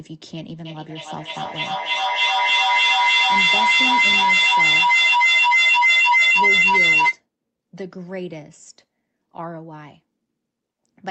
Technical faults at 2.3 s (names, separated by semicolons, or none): feedback howl